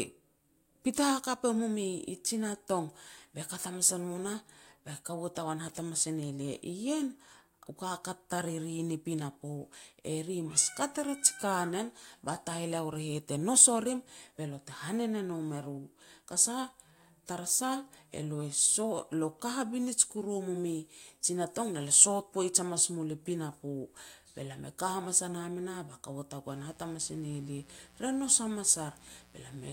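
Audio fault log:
26.48–29.72 s: mains buzz, starting just after "ba kaua" and running to the end. Sharp switching spikes enter twice per 60 Hz cycle, so harmonics of 60 Hz stack up into the kilohertz range, giving a steady, raspy buzz about 30 dB below the speech.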